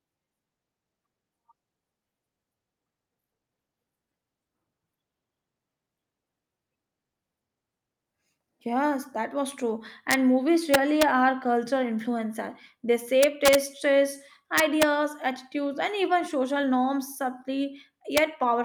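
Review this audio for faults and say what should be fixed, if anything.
Skip ahead at 7.31 s: roughly half a second of speech was discarded, probably by an overflowing jitter buffer, and playback jumps straight across it with no fill. Both sides butt together, so the delay drops by about half a second. Prevent it by sizing the buffer for burst arrivals and time-compressing gradually instead of discarding whole stretches.

Jitter buffer speed-up from 7.40 to 9.73 s: after that jump, the receiver kept trimming short pitch-period pieces to shed excess queued audio, removing around 200 ms in total. Speech runs at about 108% speed with unchanged pitch and sounds hurried. Prevent it by limiting catch-up to small, spread-out adjustments.

Integer overflow at 10.11–10.14 s, 10.74–11.03 s, 13.23–13.55 s, 14.58–14.83 s (just before "attitudes and even social") and 18.17 s: loud peaks driven only about 1 to 3 dB past full scale wrap to the opposite sign, producing harsh cracks far sharper than clipping. 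Prevent it with saturating arithmetic or a limiter ahead of integer conversion.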